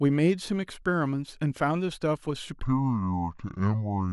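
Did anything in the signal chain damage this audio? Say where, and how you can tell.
Yes: a section at the wrong speed, from 2.63 s to the end, plays at 0.638 times speed, roughly seven semitones lower and slower, likely a playback or resampling clock mismatch.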